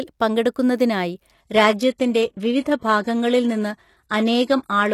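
From 1.31 s to the end, the adaptive stream falls to a lower bitrate, which fits a switch from 96 kbit/s AAC-LC to 16 kbit/s HE-AAC. The speech changes abruptly with no gap: nothing remains above 12.3 kHz, and codec artefacts rise.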